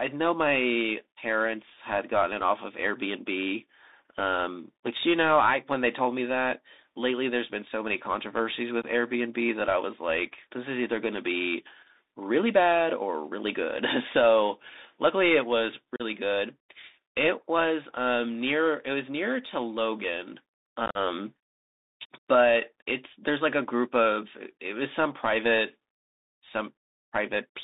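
From start to finish the speech passes through a Bluetooth CVSD headset codec. CVSD codes each sample as a single up-or-down bit and adapts its step size. The sound fits a 64 kbps narrowband headset link. Only about 250 Hz to 3.7 kHz survives, so the speech is thin and boxy. The damage is plainly audible. A grainy hiss sits under the speech, s sounds turn scratchy, and loud bright moments break up as the step size fails to keep pace.

Unconcealed Bluetooth headset packet loss then opens holes in the speech. Voice packets went missing on the headset link, and nothing filled the gaps. The first gap runs from 8.82 to 8.84 s. It removes about 15 ms, which points to a couple of lost packets. The second falls at 15.96 to 16.02 s, with 37.5 ms gone. It is a dropout with hard edges. The third, from 20.86 to 20.98 s, spreads 67.5 ms of loss across 90 ms, with the longest run at 45 ms. This points to about ten packets lost, and the speech sounds chopped and crackly there.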